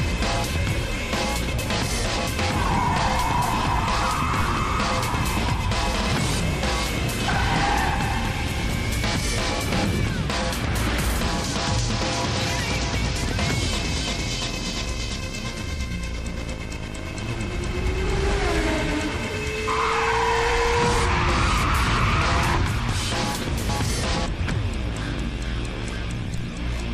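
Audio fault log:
26.38 s, DC step: right near the end the waveform's zero line suddenly jumps by about -21 dBFS, so you get a low thump with the audio carrying on unchanged. The offset then drains away, as if through a 5 Hz high-pass.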